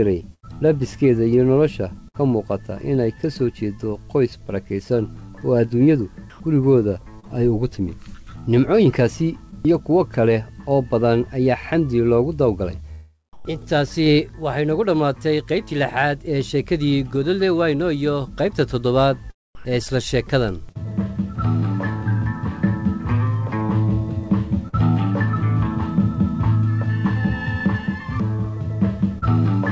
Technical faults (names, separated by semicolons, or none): sound chopped by the voice detector